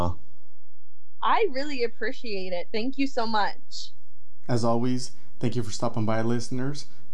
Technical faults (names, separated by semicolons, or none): DC offset